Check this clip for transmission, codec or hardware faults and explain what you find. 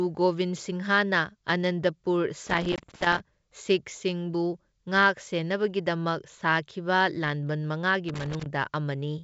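Two kinds of fault are present: a loose connector crackle that occurs twice, and one packet-loss gap on what sounds like a G.722 wideband call, whose clear speech up to about 7 kHz and faint upper-band hiss fit the 64 kbit/s mode.

Loose connector crackle, 2.47 to 3.20 s and 8.09 to 8.46 s. A worn or dirty contact is intermittently opening and closing as it shifts. This chops the signal, so each stretch is an irregular burst of scratchy crackle over the speech.

Packet loss on an ADPCM call, 2.76 to 2.81 s, inside the first crackle. About 20 ms, roughly a single packet, drops to a hard-edged silence. The decoder's predictor and step size lose track of the sender's, so the speech resumes with brief distortion before settling.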